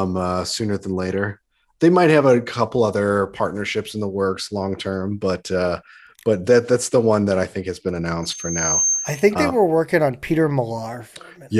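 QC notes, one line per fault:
8.22–9.32 s, loudspeaker feedback squeal: a single tone at 6.3 kHz swells out of the speech over about half a second and sits roughly level with it until it cuts off. The mic is hearing its own loudspeaker, and at that frequency the loop gain tops one, so it keeps feeding itself.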